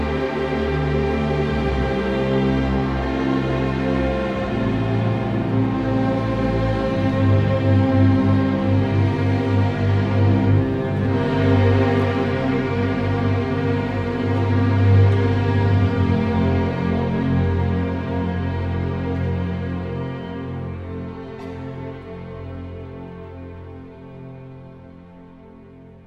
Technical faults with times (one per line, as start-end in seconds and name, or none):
none